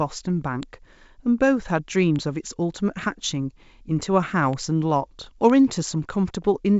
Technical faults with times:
0.63 bit error spike
2.16 bit error spike
4.53 bit error spike
5.50 bit error spike

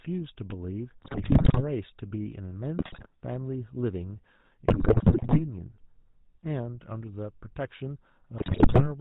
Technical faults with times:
0.00-9.00 GSM full-rate codec
1.02-1.64 GSM bit errors
2.78-3.07 GSM bit errors
4.68-5.41 GSM bit errors
8.38-8.86 GSM bit errors

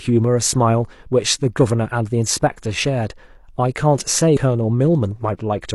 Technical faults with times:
4.32-4.38 damaged data in a compressed stream

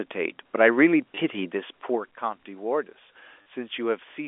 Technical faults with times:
1.02 microphone volume stepped up
1.15-1.17 packet loss with last packet repeated
3.42-3.46 packet loss with last packet repeated

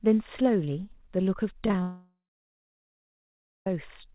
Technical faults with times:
1.66-1.82 repeated packet loss (robotic sound)
1.82-3.67 long network dropout

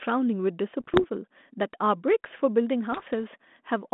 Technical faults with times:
0.80-1.05 bit errors on an ADPCM link
2.92-3.10 bit errors on an ADPCM link

